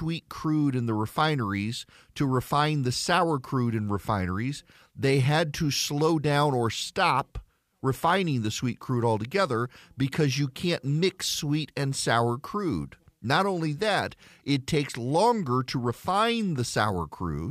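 Speech recording with no audible technical faults.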